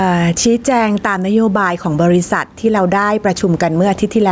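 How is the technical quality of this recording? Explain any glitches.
Gain pumping runs through the whole clip. The gain swings by roughly 10 dB. Input gain was likely set too high, so a fast limiter clamps every peak, leaving the speech squashed. The band stops near 8 kHz, as expected from call microphone processing.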